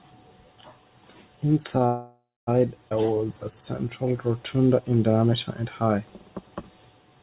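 Speech heard over a narrowband call path, with nothing above 4 kHz, which fits G.711 mu-law at 64 kbps, carries three timing faults. From 1.86 to 2.49 s the sound stalls: the last sound is stretched into a fading buzz for roughly the first 350 ms, and the final 260 ms are silent. Speech then resumes exactly where it stopped, with nothing lost. This is a call audio freeze, likely from packets held up in transit until the jitter buffer ran dry. It differs from a dropout or skip because about 0.6 s of time is inserted rather than removed. At 2.89 s the opposite happens, a skip ahead. Roughly a fifth of a second of speech is gone, and the two sides are joined through a tiny 16 ms patch, so there is a jump forward with almost no gap. An abrupt splice like this marks it as discarded audio, unlike the audible pause of the freeze. From 3.01 to 4.90 s, just before "diameter and high", the speech runs at about 90% speed while the pitch holds steady, with vowels drawn out. 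This jitter buffer slow-down comes from repeating single pitch periods to add about 204 ms of reserve. Because the pitch stays the same, it is distinct from plain tape-style slowing, which would lower the voice.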